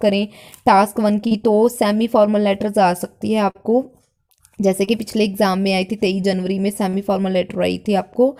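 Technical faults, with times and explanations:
1.27–1.33 s, 3.51–3.57 s, 4.85–4.89 s and 6.89–6.95 s, short concealed packet loss: each time, a block of audio failed to reach the decoder in time, 40 ms at the first, second and fourth points and 20 ms at the third. The receiver covered each gap by extending the preceding sound and then crossfading back into the real signal. The result is a brief smeared or wobbling patch, and whatever fell inside the gap is lost.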